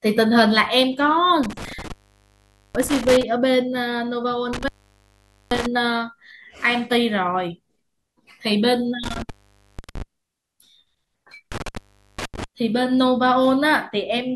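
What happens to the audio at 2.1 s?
At 2.1 s you're in the middle of an intermittent contact fault running from about 1.43 to 3.23 s. A loose cable or plug briefly opens, so the speech drops out for roughly 0.83 s, with crackle at the break edges and faint hiss while the line is open.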